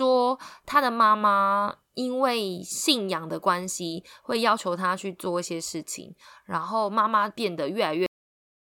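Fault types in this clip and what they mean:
Cut-off end: the final buffers never played, so the speech stops mid-sound at 8.06 s and drops straight to digital silence, with no decay or fade like a natural ending.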